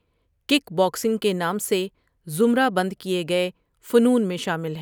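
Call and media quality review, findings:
No faults heard in this speech recording; nothing to raise against any component in the chain.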